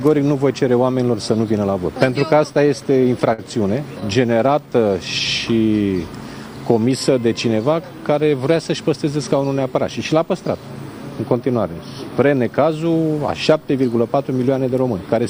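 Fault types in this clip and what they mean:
Repeated stalls (stutter): Packets arrived late or slower than playback, so the jitter buffer kept running dry and the receiver had to stretch the last sound to bridge each gap. Between 2.53 and 3.40 s this happens seven times, with about 109 ms of filler and the longest hold lasting 54 ms, roughly 13 percent of that stretch. Nothing is lost, but the sound catches and drags in small hiccups.
Jitter buffer slow-down: With its reserve running low, the jitter buffer had the receiver repeat single pitch periods or slivers of pauses over and over to rebuild it. From 4.34 to 4.90 s this adds 57 ms, so playback runs at 91 percent speed while the pitch stays put. The sound comes across as drawn out and slightly sluggish.
Jitter buffer speed-up: Here the buffer held more audio than its target, so the receiver trimmed out short pieces one or a few pitch periods long, many times in succession, to bring the delay down. 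Between 7.09 and 7.48 s roughly 40 ms disappears this way, pushing playback to 108 percent speed at unchanged pitch. The passage sounds briefly hurried and rushed forward.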